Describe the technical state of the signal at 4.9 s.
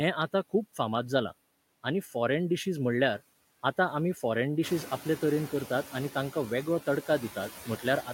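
The noise suppressor is catching up here, from 4.63 to 5.10 s. Room noise jumps by about 13 dB around 4.5 s, and the suppressor's noise estimate trails it. For those 470 ms it cuts only about 6 dB, so the louder noise comes through. It then sinks as the estimate settles.

Noise suppressor artifacts run underneath throughout, with a cut of about 15 dB. Bands judged to be steady noise are lowered frame by frame. The room noise sits about 14 dB below the speech after its rise, and the residue can warble.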